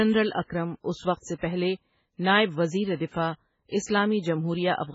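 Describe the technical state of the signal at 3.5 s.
MP3 compression damage runs through 3.5 s and the whole speech clip: nothing survives above 7.6 kHz, and the sound is watery and swirly, with smeared attacks. This is likely a starved MP3 encoder, consistent with roughly 16 kbps, cutting treble and toggling weak frequency lines frame to frame.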